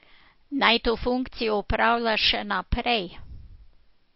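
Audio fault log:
Throughout, MP3 compression: the speech has no content above 5.6 kHz, so sibilants lose their top end and sound dull, and plainly audible watery, swirling artefacts run through the whole clip. This is likely a heavily starved MP3 encode, consistent with a bitrate around 32 kbps. Short of bits, the encoder removes the treble above a fixed cut-off and drops weak spectral lines that flicker in and out between frames, which produces the swirl.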